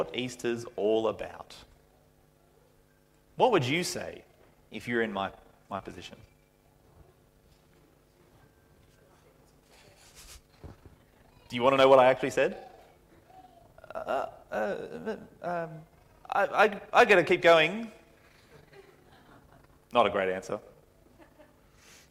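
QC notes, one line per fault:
5.77–5.81 s, short concealed packet loss: about 20 ms never arrived, and the receiver bridged the gap by extending the preceding sound, leaving a brief smear.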